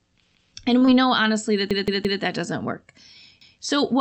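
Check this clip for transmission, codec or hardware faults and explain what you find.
Three kinds of fault are present: repeated buffers at three points, a short stall from a late packet, and a short concealed packet loss right after it. The Opus call path itself limits the audio to about 8 kHz and adds its usual coding noise.

Repeated buffer, at 0.34 to 0.51 s, 1.71 to 2.22 s and 3.41 to 3.58 s. Fresh audio failed to reach the output device in time, so it replayed its last block. Each block is about 171 ms long, which fits an 8192-sample buffer. The first and last events play the block twice. The middle event plays it four times, so a stutter runs for half a second. No audio is lost. What sets this apart from a stall is that a whole chunk of sound repeats with a hard, audible join at each restart, rather than one sound being stretched.

Short stall from a late packet, at 0.78 to 0.83 s. 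A packet arrived late and the jitter buffer ran dry. The receiver held the last sound for about 28 ms until the packet came, then resumed from the same point, so nothing is missing. It is heard as a sound lingering slightly too long, with a faint buzz or dip. Unlike a repeated buffer, there is no jump back and no hard join.

Short concealed packet loss, at 0.85 to 0.89 s. About 20 ms of the call never reached the decoder. The receiver filled roughly 18 ms by extending the preceding sound and then blended back into the real signal. It comes across as a brief smear or wobble. The difference from the stall just before it is that real audio is actually gone here, not merely delayed, so any short consonant falling in the gap can disappear.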